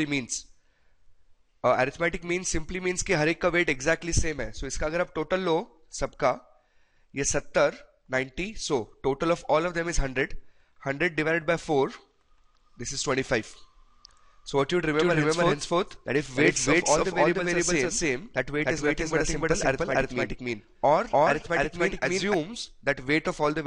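From 14.98 s to 22.34 s the audio has a doubled audio track. A second copy trails by about 300 ms at roughly equal level, likely from a slower capture path.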